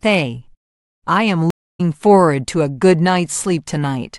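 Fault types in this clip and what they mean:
Stream reconnect: the connection dropped, the player fell silent, then reconnected and restarted its decoder mid-stream. Here the speech cuts out at 1.50 s for 272 ms and picks up again around 1.81 s at a point about a fifth of a second further on, so some speech is skipped rather than paused. That jump, plus the soft fade-in as the fresh decoder starts, separates it from a simple dropout, which resumes where it stopped.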